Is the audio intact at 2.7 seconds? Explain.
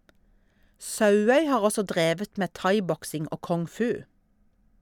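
Yes, at 2.7 seconds the speech is intact, with no audible fault at that moment.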